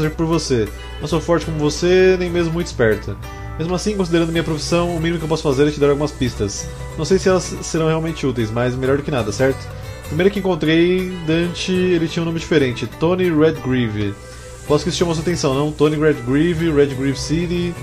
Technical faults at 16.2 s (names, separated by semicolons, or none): none